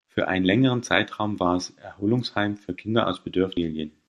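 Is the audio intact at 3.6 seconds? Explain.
No. At 3.56 s, compressed frames are skipped: the audio jumps ahead roughly 400 ms, which fits about twenty 21.3 ms frames lost or rejected by the decoder. Overlapping neighbour frames smear the join into a brief blip, with no silent gap or hard click as in a dropout.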